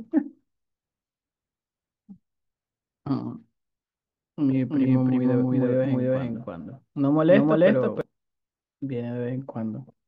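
A second, slower capture path or a misaligned edit has likely mixed this speech recording in twice, producing a doubled audio track from 4.69 to 8.01 s: a full-band copy trails around 300 ms behind at roughly equal loudness, with no decay or room colour, switching on and off abruptly.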